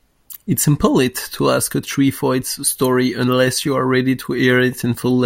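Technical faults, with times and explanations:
No technical faults can be heard in this speech recording. There is nothing here to time or explain.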